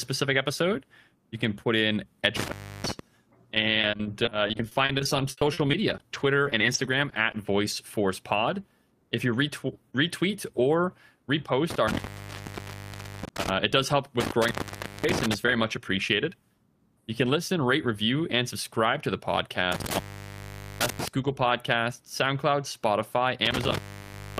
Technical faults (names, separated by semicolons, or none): intermittent contact; repeated packet loss (robotic sound)